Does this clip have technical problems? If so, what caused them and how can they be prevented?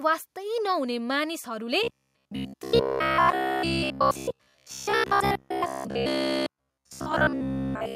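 Yes. From 1.83 s to 7.96 s the speech becomes a rigid metallic buzz near 66.8 Hz. This is robotic sound from repeated short buffers, likely a starved playback loop replaying about 15 ms chunks while most of the real audio is skipped. A larger playback or jitter buffer and steadier processing headroom would keep fresh audio arriving on time.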